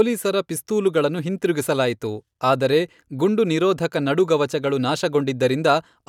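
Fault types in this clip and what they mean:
Nothing stood out on listening to the speech.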